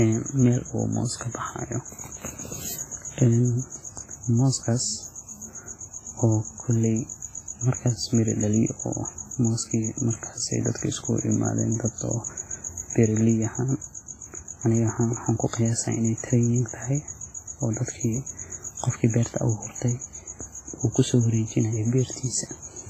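The whole speech clip carries a ringing, washy smear with hiss that breathes along with it, and nothing above 15.1 kHz, likely heavy WMA compression at roughly 24 kbps.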